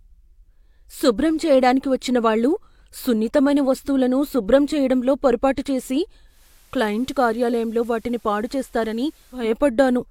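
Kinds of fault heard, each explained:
Digital radio blending to analogue: after "శుభ్రం చేయడంలో పొరపాటు చేసి" the speech cross-fades over about 0.2 s to FM, adding faint hiss and about 3 dB less level. Unlike a dropout, the sound continues.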